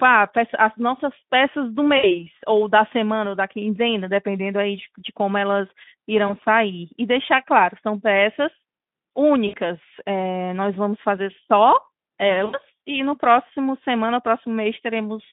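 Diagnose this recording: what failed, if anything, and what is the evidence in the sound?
Network stage: VoIP packet loss concealed by the speech codec. The speech smears into a buzzy tone or a coloured noise that fades at 1.97–2.23 s, 6.28–6.32 s, 9.47–9.56 s and 12.45–12.60 s. The decoder is extrapolating its last pitch through gaps of about 60, 20, 60 and 80 ms, so the narrowband Speex sound stays weak briefly afterwards.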